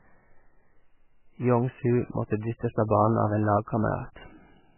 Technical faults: MP3 compression

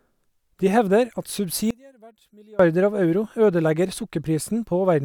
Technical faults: one channel inverted

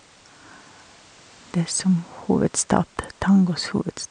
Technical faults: none

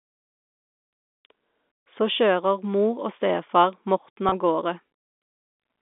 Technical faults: packet loss with pitch repetition

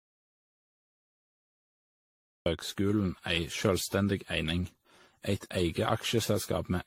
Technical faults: generation loss

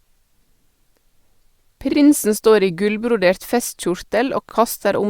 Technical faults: repeated frames

